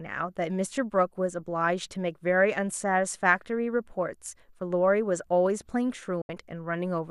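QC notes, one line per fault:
6.22–6.30 s, digital broadcast dropout: the speech cuts to silence for about 80 ms, with a very fast fade of roughly 3 ms at the edge rather than a hard click. It then resumes further along in the programme. The receiver stopped getting usable frames, either from signal loss or failed checksums, and muted its output until valid data returned. About 72 ms of audio is missing outright, which fits three lost frames. That is why the speech jumps ahead instead of picking up where it stopped.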